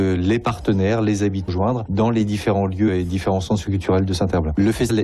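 At 4.89 to 4.91 s, right at the end of the clip, there is a brief burst of damaged data in the compressed stream, lasting about 23 ms. Some of the encoded bytes in this stretch were corrupted or lost, so the decoder could not read the affected frame correctly and lost sync until it found a valid frame header again. The result is a short glitch that breaks abruptly into the audio.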